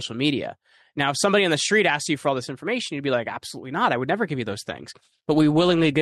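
Speech, with periodic clock jitter from 4.48 s through the end at 6.02 s. Over that stretch the sound takes on a rough, metallic edge. The converter's sampling clock is being wobbled by interference at a single rate of around 300 Hz, so each component of the speech picks up sidebands spaced about 300 Hz above and below it. Because timing error matters more as frequency rises, the upper, brighter parts of the speech carry the strongest sidebands.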